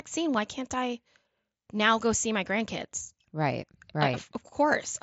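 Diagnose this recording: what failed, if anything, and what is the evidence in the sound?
Nothing in this speech recording has failed: it has come through a Bluetooth mSBC headset link at its normal wideband quality, with the audio band stopping at about 7.7 kHz and only the light grain that this codec leaves, which fits the link's usual rate of roughly 60 kbps.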